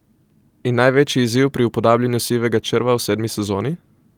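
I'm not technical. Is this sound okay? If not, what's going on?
Yes, this speech recording sounds fine, with no technical problems to be heard. There is nothing here that needs fixing.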